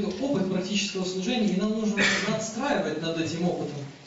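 No technical faults can be heard anywhere in the signal.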